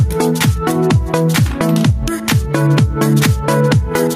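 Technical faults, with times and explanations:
Throughout, gain pumping: the level swings by around 5 dB, making the sound breathe in and out. Loud and quiet passages sit unnaturally close together, giving a squashed, flattened feel. The likely cause is input gain set far too high, with a fast limiter or compressor clamping down on every peak and letting the level recover in between.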